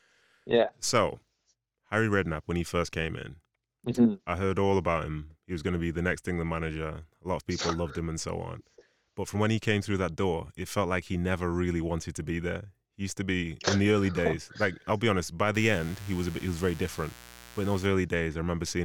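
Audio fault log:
15.55–17.86 s, mains buzz: switching spikes from a dimmer, rectifier or unshielded line get into the signal path twice per 60 Hz cycle, spreading harmonics up into the kilohertz range, so the speech picks up a steady, raspy buzz, roughly 20 dB below the voice, for about 2.3 seconds.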